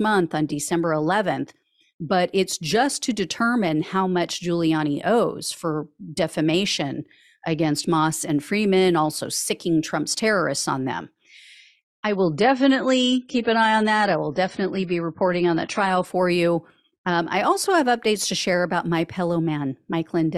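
At 12.05 s the speech abruptly gets duller and more smeared, with no gap in the audio. That's an adaptive stream at a lower bitrate: the connection slowed, so the player switched to a cheaper encoding, which fits a drop from around 96 to 24 kbit/s AAC. Codec artefacts climb and everything above 10 kHz is gone. It snaps back at 16.05 s, just before "for you".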